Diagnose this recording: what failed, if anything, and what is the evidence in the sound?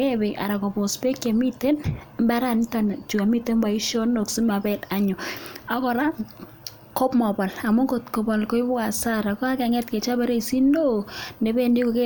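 Nothing failed: no stage of the chain, from capture through to playback, leaves an audible mark on this speech recording.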